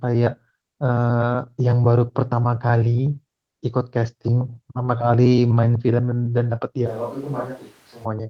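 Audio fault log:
6.88–8.04 s, switch to a distant microphone: The speech suddenly turns roomy and hollow, with thinner bass. It drops about 10 dB in level. Room noise rises to roughly 25 dB below the speech. The close microphone's signal likely dropped out here, leaving a pickup further from the talker. That pickup captures more reflections and ambience and less direct sound. At 8.04 s the close, fuller sound returns just as abruptly.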